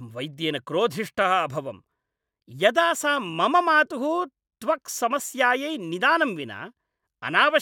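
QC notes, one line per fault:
No technical fault can be heard in the speech signal.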